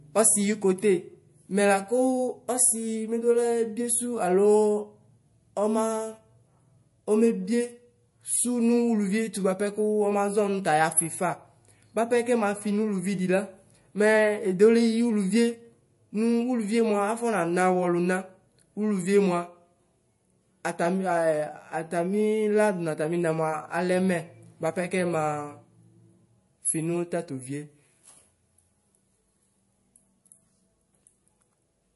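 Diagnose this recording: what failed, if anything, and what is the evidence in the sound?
The failure sits at the codec stage, likely MP3 compression at a low bitrate, and it runs through the whole speech clip. Nothing is present above 11.3 kHz, a hard treble ceiling that fits an encoder starved to around 48 kbps. With so few bits, weak frequency lines drop in and out between frames, so the damage is plainly audible: a watery, swirling texture, metallic chirping on s sounds, and smeared consonant attacks.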